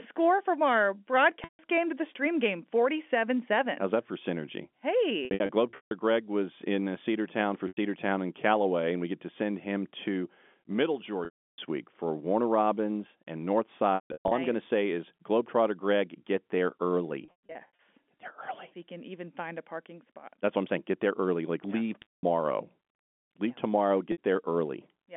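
Speech over a narrow telephone band, with eight brief dropouts where the sound hangs on a held, buzzy tone and then fades: at 1.44, 5.25, 7.68, 11.25, 13.95 (just before "nice I'm going to"), 17.25 (just after "get there"), 22.02, and 24.12 s (just after "yeah tomorrow"). This is packet loss with pitch repetition. Each gap lasts 60 to 330 ms. At 5.25, 13.95 and 17.25 s the losses are scattered across up to 660 ms, with the longest run 150 ms. The receiver repeats the last pitch cycle to fill each gap and lets it fade. The band-limited tone fits ordinary G.711 telephone coding.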